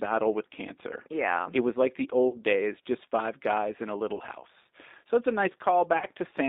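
The G.729 codec shapes the whole speech clip at 8 kbit/s. The line band runs from 250 Hz to 3.7 kHz, so it sounds thin. Each 10 ms frame is rebuilt from a filter, pitch and a few pulses. This leaves a plainly rough, synthetic edge.

VoIP packet loss concealed by the speech codec strikes three times. The first is from 2.29 to 2.38 s, between "was like the" and "days just five guys". The second is from 4.15 to 4.22 s, after "five guys in a". The third is from 5.98 to 6.06 s. Each drops 40 ms, which points to two lost packets. The decoder stretches its last pitch and filter into a brief buzzy tone or coloured noise that fades.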